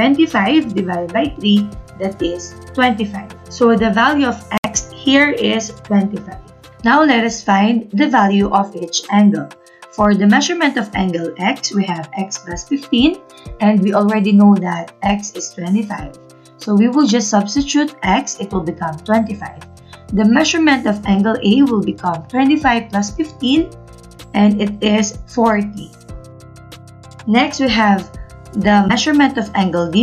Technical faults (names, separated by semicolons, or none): Bluetooth stall